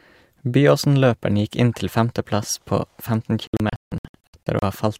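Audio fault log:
3.47–4.63 s, digital broadcast dropout: the speech breaks into several short silent holes over about 1.15 s, totalling 576 ms, the longest 160 ms, as the receiver mutes each time incoming frames fail and unmutes when good ones return. Unlike packet-loss concealment, the gaps are true silence with no smeared or repeated fill. Unlike a buffer underrun, the speech resumes further along rather than picking up where it stopped, so the material sent during each hole is gone.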